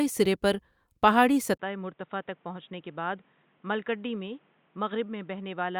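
At 1.58 s the speech drops out for 20 ms, then returns dull and boxy to the end, roughly 10 dB quieter, with nothing above 3.8 kHz and a new noise floor around 35 dB below it. This is likely an input switched to a poorer device.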